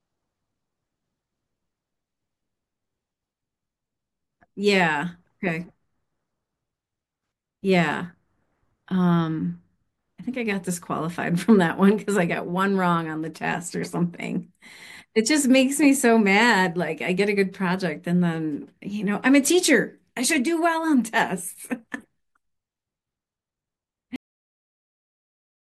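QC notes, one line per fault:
24.16 s, cut-off end: the speech stops mid-sound and drops straight to digital silence for the remaining 1.6 s, with no decay or room tail. The final buffers were never written out. The waveform ends in a hard vertical edge to a flat line, and the spectrogram shows a sharp blank wall.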